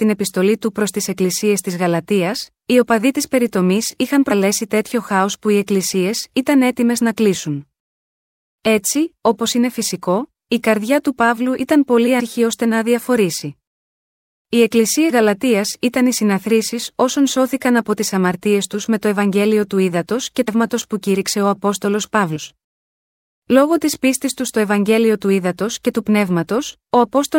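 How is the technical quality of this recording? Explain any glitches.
The speech is marred by compressed frames skipped, heard at 4.3, 12.19, 15.09, 20.47 and 22.35 s. Whole coded frames never play, so the audio leaps ahead by roughly a tenth to a third of a second. Overlapping frames smear each join into a brief blip. After "ήταν πολύ" the jump is among the largest, about 0.3 s.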